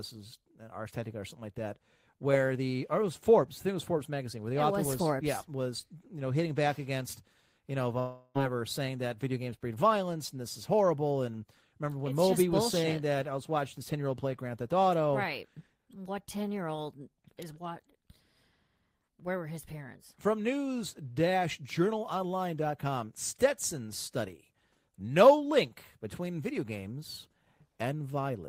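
A speech clip with a long network dropout. After "back against you know", from 7.99 to 8.37 s, a fading buzz fills the gap. It resumes at "saying that video games" with that stretch gone, likely lost in transmission.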